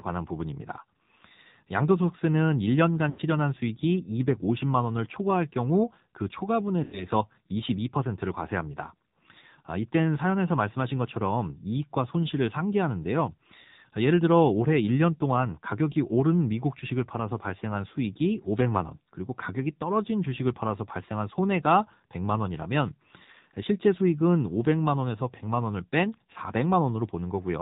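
The whole recording runs through an AMR narrowband mobile codec, and the damage is plainly audible. Everything above 4 kHz is gone, so the speech sounds boxed-in and telephone-like. The codec rebuilds the voice from a vocal tract model driven by sparse pulses, and here that gives a buzzy, synthetic edge, the kind you'd expect from a low AMR-NB mode around 7.4 kbps.

Then there are two bursts of lost AMR speech frames, at about 3.10 to 3.21 s and at about 6.84 to 7.07 s. Each sounds like roughly 80 ms of missing audio, which points to a run of about four frames dropped on the radio link. When that happens, the decoder keeps replaying its last good pitch and vocal tract settings at falling gain. You hear the sound smear out and sag toward silence, and then the voice comes back rough for a moment.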